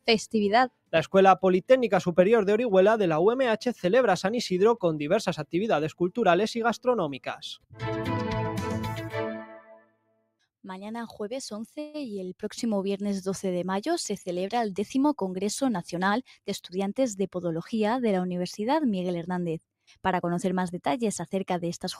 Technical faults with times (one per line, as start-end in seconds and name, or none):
0.69-0.93 sound cut by the noise suppressor
7.60-7.81 sound cut by the noise suppressor
9.47-10.30 sound cut by the noise suppressor
11.79-11.96 call audio freeze
14.80-16.78 jitter buffer speed-up